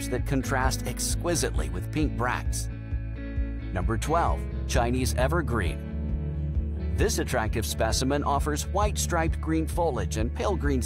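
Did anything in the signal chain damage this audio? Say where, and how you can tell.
Yes. From about 6.21 s to the end of the clip, there's sample clock jitter at the converter. You can hear a fine hiss or grittiness riding on the sound that gets stronger on loud, bright passages and drops away when things go quiet. The sampling clock is wobbling by something like a microsecond, so samples land slightly early or late. On steep waveform slopes, that timing error becomes an amplitude error roughly 40 dB below the signal.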